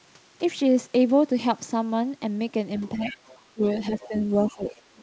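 An echo canceller likely left residual echo from 2.78 to 3.4 s, so the other side's voice leaking through sits about 20 dB under the talker, faint. Likely overlapping talk then made the canceller duck both sides, so speech suppressed in double talk dips by around 15 dB between 2.96 and 4.14 s. The leaking voice returns from 3.98 s to the end, and a second suppression, likely from the same cause, dips the talker between 4.47 and 4.95 s. Through the call path the audio carries nothing above 8 kHz.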